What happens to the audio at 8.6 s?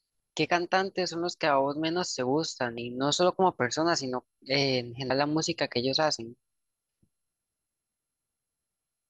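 Nothing goes wrong at 8.6 s: the speech there plays through intact, with no dropout, click, distortion or other fault.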